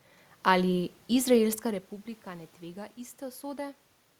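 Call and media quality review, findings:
Nothing to flag on the system side: the background room noise is part of the recording, and the level change around one and a half seconds in is simply the talker shifting position relative to the mic.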